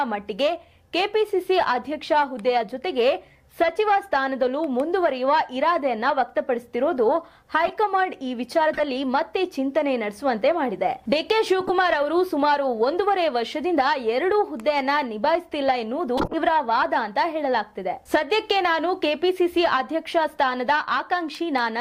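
At 7.66, 8.73, 11.61 and 16.17 s there are short glitches of corrupt frame decoded, a few damaged compressed frames played anyway, so energy lands at wrong frequencies. The last runs longest, near 0.18 s, and most peak near -10 dBFS.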